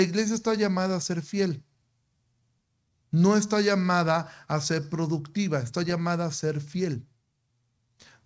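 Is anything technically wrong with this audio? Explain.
Yes. There is clock drift between sender and receiver. It runs through the whole clip, and the sender's clock is roughly 3% slow. Audio arrives more slowly than the receiver plays it, so the jitter buffer keeps draining and has to be refilled by repeating material. This shows up as slight, irregularly spaced timing hiccups.

Those repeated timing corrections span 0.32 s to 7.62 s. The receiver keeps inserting short repeated pieces, always lengthening, never cutting. Playback runs at 97% speed and gains about a fifth of a second overall. The result is a faintly uneven, dragging tempo. The G.722 call path contributes its band limit, with nothing above 8 kHz.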